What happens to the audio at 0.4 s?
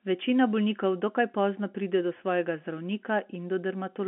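Nothing goes wrong at 0.4 s: the speech carries on intact, with only the narrow band of G.711 telephone coding that runs through the whole recording.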